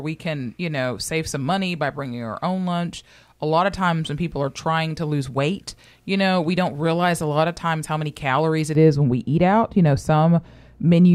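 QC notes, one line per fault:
8.75–11.15 s, de-emphasis applied wrongly: just after "how many calories it", the speech turns dull and muffled and stays that way to the end of the clip. A treble-cut filter of the kind used to reverse pre-emphasis has been applied to material that carried no boost or had already been de-emphasised, so nothing offsets it. The result is a smooth downward tilt, about 11 dB lower at 10 kHz than at 1 kHz, which softens consonants and strips away air and presence.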